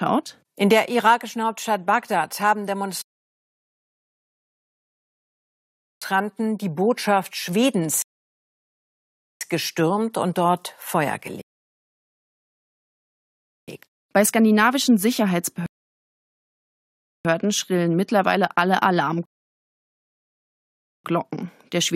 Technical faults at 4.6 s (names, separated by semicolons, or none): rebuffering stall